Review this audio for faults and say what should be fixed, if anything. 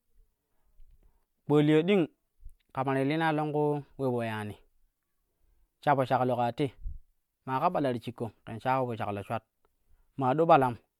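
Generation loss runs through the whole speech clip. It sounds swirly, smeared and hollow, and attacks blur. Nothing remains above 20.1 kHz. The likely cause is about five MP3 passes near 128 kbit/s, each on a shifted frame grid, stacking noise and spectral holes. Keep a lossless master and encode to MP3 only once, at the final step.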